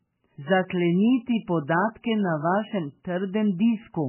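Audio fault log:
throughout, MP3 compression: likely a very low-bitrate encode, with nothing above 3 kHz, so the speech sounds dull, watery and swirly, with smeared attacks.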